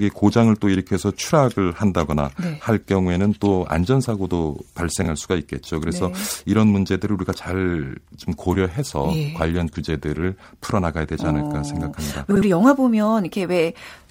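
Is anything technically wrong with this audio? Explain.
Yes, the speech has frames out of order twice: from 5.02 to 5.08 s, and from 12.31 to 12.42 s. In each, two neighbouring blocks were decoded in swapped order, 26.1 ms each at first, which fits single codec frames, then 52.2 ms each, which fits pairs of frames. It sounds like a brief garbled flutter, but nothing is lost. On a waveform and spectrogram, both spots show abrupt discontinuities at three boundaries, with short segments exchanged.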